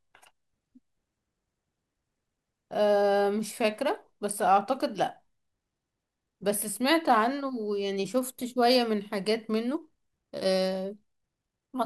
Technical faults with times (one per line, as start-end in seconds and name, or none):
9.64-11.86 time-stretched section